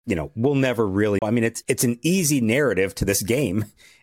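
A CD skip occurs from 1.19 to 1.22 s: the laser lost its place and landed on a different turn of the disc's spiral, so the player mutes for roughly 30 ms and resumes the speech abruptly from another point.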